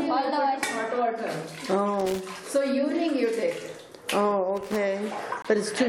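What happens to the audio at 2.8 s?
Nothing goes wrong at 2.8 s; the audio carries on intact through that moment, with no dropout, click or other audible fault.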